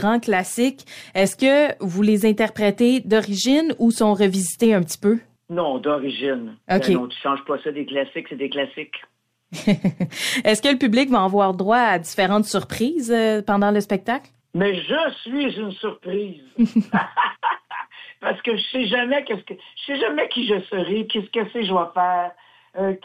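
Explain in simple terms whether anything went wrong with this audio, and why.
Nothing stood out as wrong when listening to this recording.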